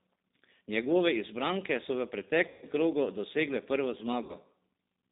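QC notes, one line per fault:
Throughout: G.729 codec. The speech is confined to a telephone band of roughly 200 Hz to 3.7 kHz, so sibilants and upper harmonics are missing and the sound is thin. At 8 kbit/s the decoder rebuilds each 10 ms frame from a vocal tract filter, a pitch predictor and a handful of pulses, and that sparse excitation leaves the voice plainly rough and synthetic. The mechanism fits G.729A.
2.48–2.67 s and 4.23–4.36 s: VoIP packet loss concealed by the speech codec. The first gap comes after "izbranke so v" and covers about 140 ms of lost audio. The second, about 60 ms, follows "krogu dosegle prvo". In each case the decoder repeats its last pitch and filter state at decreasing gain, so the speech smears into a fading buzzy tone or coloured noise. Since each frame is predicted from the one before, the voice stays weak or distorted for tens of milliseconds or more after packets resume.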